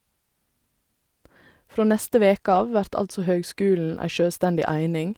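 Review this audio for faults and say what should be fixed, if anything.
Between 2.51 and 2.65 s there's a lost packet rebuilt from error correction. A few packets went missing, and the decoder played the low-bitrate backup copies carried in the next packets, so the speech never drops out but turns briefly rough and noisy. To prevent it, reduce packet loss on the link, for example with a steadier connection or a larger jitter buffer.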